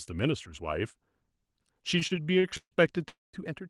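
A short speech recording, and from 1.99 s to 3.05 s it suffers repeated stalls (stutter): the sound keeps catching and dragging, with nine brief holds adding up to about 310 ms, the longest about 145 ms, roughly 29 percent of that stretch. Packets are arriving late or slower than playback, so the jitter buffer keeps draining and the receiver stretches the last bit of sound until data returns. Nothing is actually lost. On a spectrogram these show as short smeared, horizontally streaked patches where the harmonics freeze in place, and the waveform shows repeated, slightly decaying copies of the same cycle. At 3.08 s to 3.36 s comes a longer call audio freeze: the sound hangs as a fading buzz for about 250 ms, most of it, around 190 ms, near silence, before resuming exactly where it stopped, which pushes everything after it about 250 ms later. This is likely a longer network hold-up emptying the buffer. 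The waveform shows a tapering tail into a flat stretch, and the spectrogram a blurred band fading to a dark gap. From 3.48 s to the end there is a sudden gain jump, with speech and background noise dropping together by about 6 dB at a single instant. The likely cause is a digital gain change applied without a ramp. The waveform envelope steps down abruptly, and the whole spectrogram darkens from that point onward.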